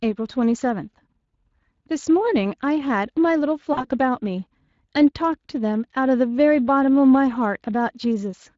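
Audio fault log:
throughout: Speex codec. The speech has a plainly audible hoarse, grainy roughness, because this CELP coder has too few bits to model the excitation faithfully and substitutes an approximate, noisy pulse pattern. The damage fits a Speex mode of around 20 kbps. It differs from MP3-style or AAC damage in that there is no swirling or metallic warble in the high band. The harm sits in the voicing, which sounds breathy and coarse.
3.73 to 3.85 s: VoIP packet loss concealed by the speech codec. About 40 ms of audio went missing, which fits two lost 20 ms frames. Rather than a hard silence, the decoder extended its last pitch and filter state with falling gain, so the sound smears into a short fading sound. Because each frame builds on the one before, the speech stays weak or distorted for tens of milliseconds or more after the packets resume.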